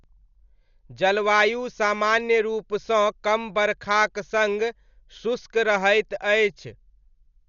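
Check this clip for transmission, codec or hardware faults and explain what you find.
One codec fault runs through the whole recording. Throughout, the speech sounds dull and heavily damaged, with nothing above 7 kHz and a rough, fluttering noise around tones. The likely cause is Dolby Digital compression at a starved bitrate, consistent with about 48 kbps. The encoder narrows the band and leaves many frequency lines without mantissa bits, which the decoder fills with dither noise.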